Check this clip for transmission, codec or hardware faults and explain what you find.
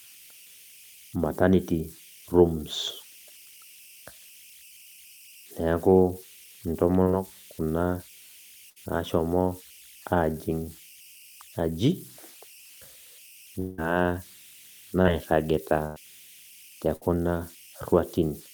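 The clip shows faults from both the conversion hardware and the network path.

Converter idle tones run throughout the speech: an undithered delta-sigma converter locks into repeating bit patterns, leaving a whistle around 3 kHz, about 25 dB below the signal.

Short concealed packet loss occurs at 7.03 to 7.08 s and 15.02 to 15.06 s. About 20 ms went missing each time and was bridged by extending the previous sound, heard as a brief smear.

Bursts of packet loss fall at 8.70 to 8.78 s, 15.86 to 15.98 s and 16.96 to 17.03 s. Gaps of 60, 100 and 60 ms were filled with continued, decaying sound, leaving a held buzz or fading hiss before the audio resumes further on.

At 13.60 to 13.80 s, about 180 ms of audio is replaced by a fading continuation of the preceding sound with no silent stretch. This is likely a long network dropout, with the missing section skipped when the audio resumes.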